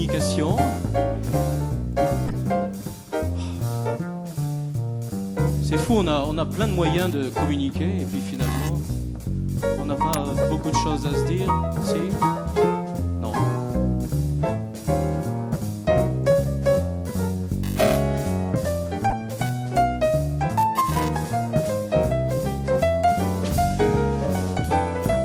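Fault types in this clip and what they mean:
Corrupt frame decoded: Three brief squeaky, noisy blips cut through the sound, the longest at 2.26 to 2.36 s, with shorter ones at 10.42 to 10.44 s and 19.10 to 19.13 s. Each is the decoder playing a compressed frame whose bits were damaged, so misread gains and codes throw energy into the wrong frequencies; the lengths point to several consecutive frames hit in the first burst and only two or three each in the others.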